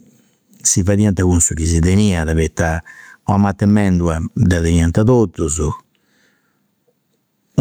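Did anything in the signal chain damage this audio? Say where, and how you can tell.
Yes. Throughout the speech there is gain pumping: loud and soft parts sit closer in level and the sound is squashed, with a swing of around 15 dB. The likely cause is input gain set far too high, with a fast limiter or compressor clamping it back.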